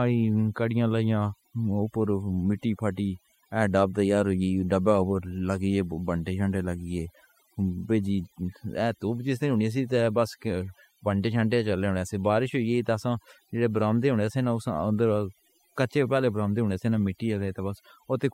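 Speech runs through overdone noise removal throughout: twinkling specks over near-silent gaps, unlike a noise gate, which mutes everything at once.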